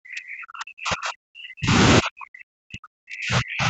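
From the start to 1.74 s, and again from 2.01 s through to the end, the talker keeps dropping away, sometimes by as much as about 40 dB, so the speech comes through thinned out and broken into pieces. That's speech suppressed in double talk, likely from the far side talking at the same time. The echo canceller couldn't tell the local voice from loudspeaker echo, so it turned both down. The top end stops at 8 kHz throughout, which is just the call codec's bandwidth.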